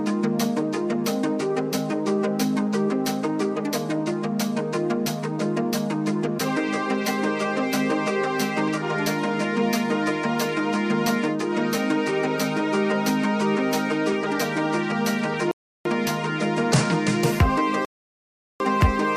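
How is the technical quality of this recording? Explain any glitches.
Two glitches stand out, both rebuffering stalls. At 15.51 to 15.85 s and again at 17.85 to 18.60 s, playback starved for data and froze, adding 0.34 s and 0.75 s of silence before resuming exactly where it stopped. On a waveform and spectrogram each appears as a flat, empty gap with no missing material.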